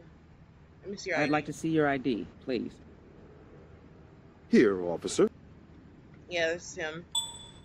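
A short stretch of audio where compressed frames are skipped once, at about 1.05 s. The sound jumps ahead by roughly one frame, around 20 ms of material that never plays, which fits a codec using 20 ms frames. This is not a silent dropout: no gap of silence is heard, and the audio simply resumes from a later point.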